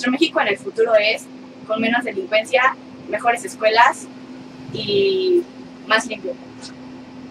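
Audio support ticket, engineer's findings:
Nothing stood out on listening to the clip.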